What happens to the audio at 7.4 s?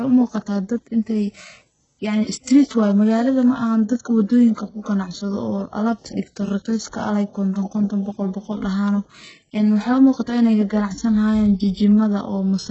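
HE-AAC compression damage is present at 7.4 s and runs through the whole clip. The heavy codec damage points to a likely HE-AAC encode at a very low rate, consistent with about 8 kbps. Only the lower band is properly coded. The treble is rebuilt by copying lower bands upward under a coarse envelope, so harmonics fail to line up across the crossover. Sibilants sound gritty and lispy, and nothing is heard above 8 kHz.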